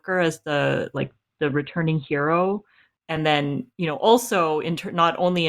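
From 0.97 to 2.97 s, just after "as the", the player fell back to an adaptive stream at a lower bitrate, consistent with Opus dropping from about 64 to 16 kbit/s. The speech abruptly loses everything above 4.4 kHz, turning dull, with no gap.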